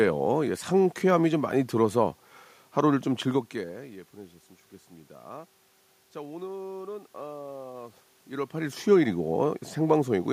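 No technical faults can be heard anywhere in the recording. The background noise belongs to the room itself, and the level shifts at around 3 s and again near 8 s come from the talker moving relative to the microphone.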